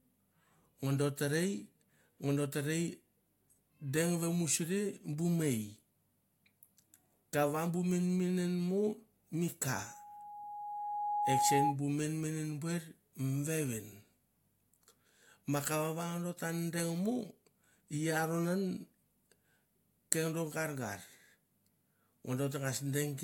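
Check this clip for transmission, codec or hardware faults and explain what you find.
There is one fault, a loudspeaker feedback squeal from 9.83 to 11.76 s, between "menmenen mo mi ka" and "bu menmenem buer mi". The microphone picked up its own loudspeaker, and loop gain passed unity at 829 Hz. That tone swells over about a second and a half into a steady squeal roughly 5 dB above the speech.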